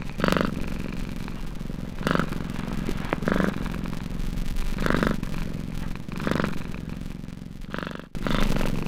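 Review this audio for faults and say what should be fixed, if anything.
A filter is restarted on every block, discarding its stored state and starting each block from silence, so each block opens with a small transient. Throughout the clip this is heard as a 200 Hz buzz that follows the level of the sound, which fits blocks about 5 ms long. To prevent it, keep the filter's internal state across block boundaries so each block continues where the previous one ended.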